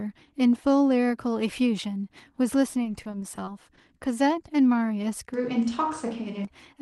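Speech carried over a call link, band-limited at about 12 kHz in a way consistent with an Opus codec at around 24 kbps. From 2.83 to 3.79 s there is repeated packet loss (robotic sound): eight short dropouts, none longer than 20 ms, each filled by extending the preceding audio, so about 160 ms, or 17% of the span, is concealed and the speech turns choppy and robotic. From 5.34 to 6.45 s the sound turns roomy and hollow with thinner low end and background noise about 30 dB below the speech, with no obvious level change, most likely a switch to a distant microphone after the close one dropped out, with an abrupt change in both directions.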